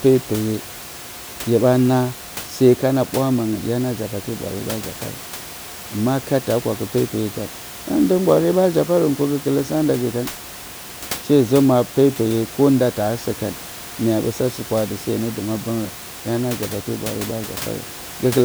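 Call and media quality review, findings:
Nothing stood out on listening to this speech clip, with only the room's own background noise sitting about 15 dB below the talking.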